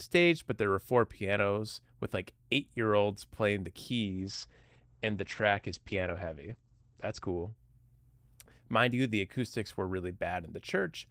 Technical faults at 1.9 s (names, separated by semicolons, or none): none